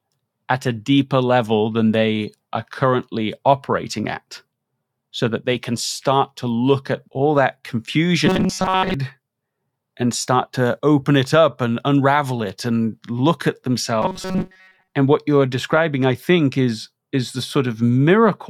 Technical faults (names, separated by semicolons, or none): robotic sound from repeated short buffers